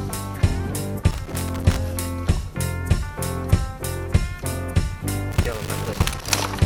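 Two irregular bursts of crackle and scratching break into the sound, from 1.11 to 1.78 s and again from 5.32 to 6.34 s, chopping the signal into ragged fragments. This is loose connector crackle: a worn or dirty contact somewhere in the chain is flickering between touching and not touching as it shifts, cutting the audio on and off, and any DC on the line turns each make or break into a click.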